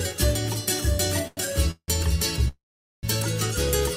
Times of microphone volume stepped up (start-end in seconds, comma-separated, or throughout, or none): none